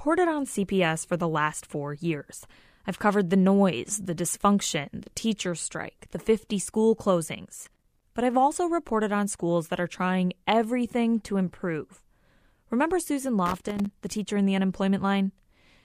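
An irregular burst of crackle and scratching cuts through the speech from 7.63 to 8.03 s, and a second, similar burst follows from 13.46 to 13.91 s. Both are loose connector crackle: a worn or dirty contact in the signal path makes and breaks in quick succession as it shifts, chopping the audio into fragments, while any DC present on the line turns each make and break into a pop.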